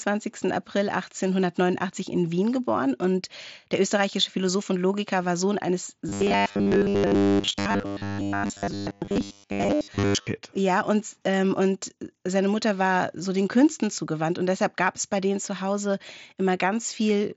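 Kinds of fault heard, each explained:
Robotic sound from repeated short buffers: Between 6.09 and 10.27 s the speech turns into a stiff, metallic buzz locked at 100 Hz, still loosely tracking the talking. The likely cause is a playback stage starved of fresh audio and looping the last snippet, which fits a 10 ms buffer, so most of that stretch is repeated material rather than real signal. It sits inside the Bluetooth mSBC band, so nothing above about 7.7 kHz.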